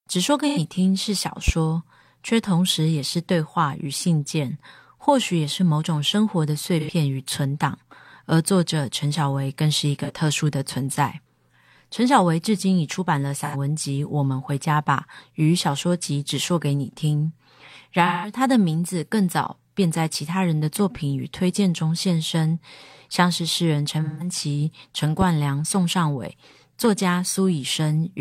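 AAC frame loss with concealment first strikes at 0.48–0.58 s, where about 85 ms of coded speech never reaches the decoder. The decoder fills the hole from the last good spectrum, leaving a brief smeared, noisy, phasey patch in place of clean speech.

At 1.48–1.52 s a loud pop appears, likely a voltage step from a plug, switch or static discharge. It is a single sharp pop roughly 15 dB above the speech, and the talking continues underneath.

Frame loss returns at 6.80–6.90 s (about 85 ms), 10.04–10.11 s (about 43 ms) and 13.44–13.56 s (about 85 ms). Each gap is rebuilt the same way, so each sounds like a short smeared smudge. The losses grow to about 171 ms at 18.06–18.33 s and 24.03–24.31 s, where the concealed stretch lasts longer.

A second loud pop at 25.21–25.25 s is a single sharp click sitting roughly 10 dB above the speech.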